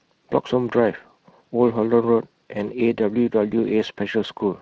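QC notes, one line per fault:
Throughout, Speex codec. The speech carries a plainly audible coded texture, rough and hoarse. Speex models the vocal tract and encodes the excitation with limited bits, so fine detail turns noisy. The damage fits a Speex mode near 20 kbps.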